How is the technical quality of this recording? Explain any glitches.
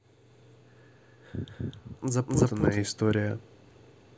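The recording has one clear fault, a channel delay heard as doubling, running from the start to about 2.77 s. For that stretch one channel reaches the mix 256 ms after the other, a lag that fits a 4096-sample buffer. When the two channels are summed to mono, the late copy doesn't blend with the original. It sits behind it at equal level, so the speech sounds doubled, with a distinct slap echo trailing each syllable by about a quarter second.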